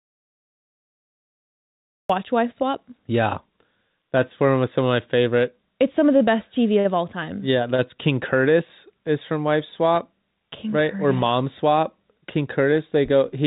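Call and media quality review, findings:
Audio dropout to silence, 0 to 2.1 s, already under way at the start. Silent gap, no room tone. Likely lost input or mute upstream of the encoder.

Short stall from a late packet at 7.75 to 7.96 s. Jitter buffer ran dry. About 31 ms held and stretched, with nothing lost. Playout delay rose about 31 ms.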